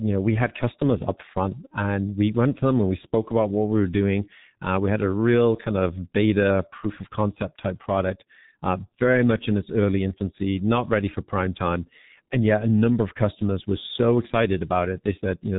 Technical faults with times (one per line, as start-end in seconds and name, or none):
0.00-15.58 G.723.1 codec
1.68-1.74 VoIP packet loss concealed by the speech codec